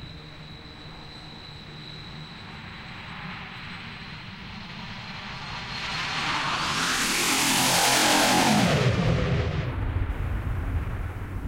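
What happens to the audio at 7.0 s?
Nothing goes wrong at 7.0 s: the sound carries on intact through that moment, with no dropout, click, distortion or other fault.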